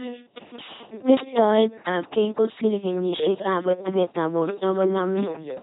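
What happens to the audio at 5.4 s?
At 5.4 s the speech is still passing through the LPC-10 vocoder, which affects the whole clip rather than just that moment. The codec discards the actual waveform, keeps only a ten-pole vocal tract filter, and drives it with either a pulse train or noise, forcing each frame to be wholly voiced or wholly unvoiced. That heavy damage, which fits a 2.4 kbit/s rate, leaves a buzzing, robotic voice with no content above 3.8 kHz.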